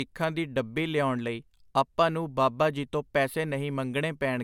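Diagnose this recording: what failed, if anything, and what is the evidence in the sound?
Nothing in the speech signal points to a failure at any stage of the chain: the level stays steady, the sound runs continuously without interruption, and the waveform shows no trace of damage from capture, conversion, transmission or playback.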